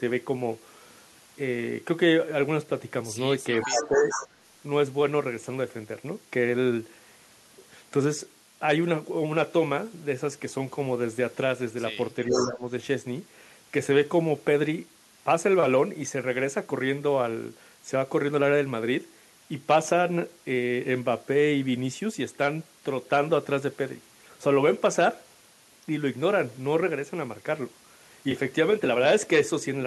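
Across the whole speech clip runs low bit depth with dither: the audio is carried on only 8 bits, and dither turns the rounding error into a constant, even hiss around 30 dB below the speech. Unlike undithered truncation, it has no gritty distortion that follows the signal.

From 3.61 to 4.28 s comes echo leak: a delayed copy of the speech, about 431 ms late and roughly 10 dB down. It is likely the far end's echo canceller letting loudspeaker sound back into its microphone. It is a distinct repeat, not room reverberation.

Overlapping it, from 3.64 to 4.16 s, the speech is suppressed in double talk. For about half a second the level sags, at its deepest by around 15 dB, which is likely the canceller ducking everything while both sides sound at once.

Both recur later. The speech suppressed in double talk returns from 12.27 to 12.68 s, a shallower dip of around 10 dB. The echo leak, again 431 ms late and roughly 10 dB down, shows from 12.32 to 12.51 s.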